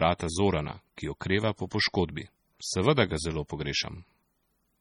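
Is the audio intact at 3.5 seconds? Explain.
No. At 3.5 seconds the speech carries the same heavy damage found throughout: likely MP3 compression at a low bitrate, around 32 kbps. Weak frequency lines flicker, giving a watery, swirly sound. A spectrogram shows patchy, blinking holes.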